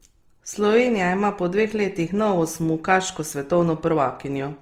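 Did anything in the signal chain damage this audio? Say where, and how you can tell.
Yes. Opus compression damage runs through the whole speech clip, likely introduced at the codec stage. Bandwidth stays full, yet the upper bands sound rough and grainy rather than hollow or swirly. That points to the music (CELT) mode short of bits, at a rate that fits about 24 kbps. The encoder preserves each band's energy but fills starved bands with noise or folded copies of lower bands, so detail turns coarse instead of dropping out.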